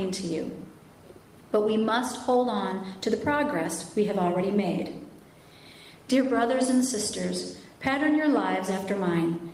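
No technical faults can be heard anywhere in this audio.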